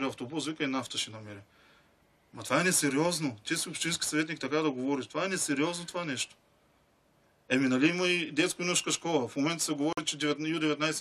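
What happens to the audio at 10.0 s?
Just before 10.0 s, from 9.93 to 9.99 s, a corrupt frame muted fault leaves an abrupt 66 ms hole of pure silence, which fits two damaged compressed frames the decoder rejected. Unlike a concealed or skipped loss, nothing is smoothed over and the timing holds.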